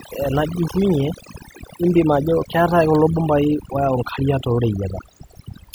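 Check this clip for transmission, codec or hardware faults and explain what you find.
The speech runs throughout over a lowered background that breaks up into twinkling specks: overdone noise removal, where an overly strong denoiser mutes bands near its noise estimate, taking quiet speech with them.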